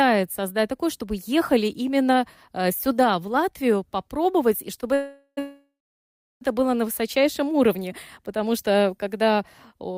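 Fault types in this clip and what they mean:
short stall from a late packet: At 4.75 to 4.79 s, just after "попробовать и", one sound is held about 18 ms too long, with a faint buzzy edge, and then the audio picks up exactly where it left off with nothing lost. The jitter buffer briefly ran dry while waiting for one late packet, so the receiver stretched the last sound. Unlike a freeze, it never fades toward silence.
call audio freeze: Two back-to-back holds run from 4.94 to 5.39 s and 5.39 to 6.43 s, ending just before "было на". Each time the last sound is carried on as a buzz that decays, with about 40 ms of silence in the first and roughly 680 ms of silence in the second. Speech then resumes unbroken, so about 0.43 s and 1.02 s of gap are inserted rather than anything removed, likely from packets delayed in transit.
jitter buffer slow-down: Between 7.22 and 7.89 s, after "было на" and before "потому что когда", the speech drags at about 92% of its normal rate. 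The pitch stays the same, with sounds slightly drawn out. The receiver repeated single pitch periods to rebuild its buffer reserve, adding about 59 ms overall. There is no hold and no gap as in a stall or freeze, only an even stretching of the audio.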